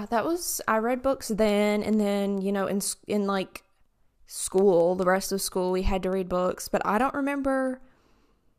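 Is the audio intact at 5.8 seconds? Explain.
No, word clock ticks run from 0.17 to 8.56 s, covering 5.8 s. The receiving device's clock drifts roughly 100 ppm from the sender's, so one sample is dropped or repeated each time they slip, giving sharp, uneven ticks about five times a second.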